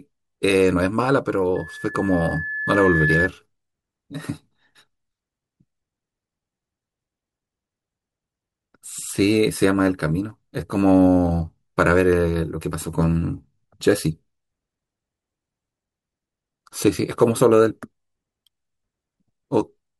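From 1.55 to 3.29 s, a loudspeaker feedback squeal rises over the speech. A microphone is hearing its own loudspeaker. At 1.7 kHz the loop gain passes one. That single tone swells for about a second and a half, reaching roughly the speech level.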